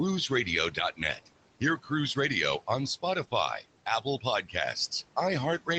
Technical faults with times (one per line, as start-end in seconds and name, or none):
0.00-5.78 noise suppressor artifacts
1.78-1.91 speech cut by the noise suppressor
4.42-4.55 speech cut by the noise suppressor